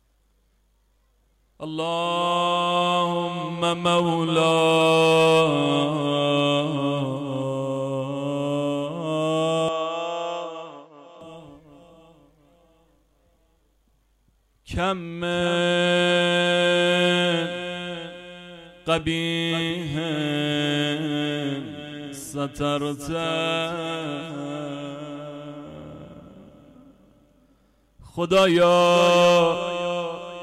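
From 9.68 to 11.21 s the sound drops about 5 dB, goes dull with nothing above 7.6 kHz, and gains new hiss, likely an input switched to a poorer device.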